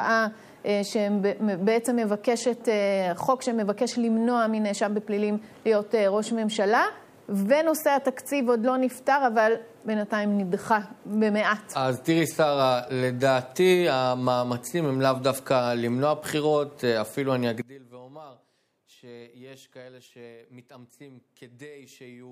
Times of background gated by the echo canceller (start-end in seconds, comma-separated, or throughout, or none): none